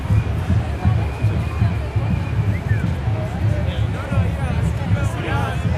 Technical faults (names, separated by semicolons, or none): none